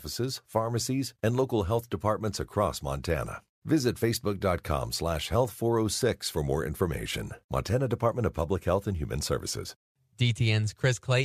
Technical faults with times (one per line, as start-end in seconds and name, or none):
none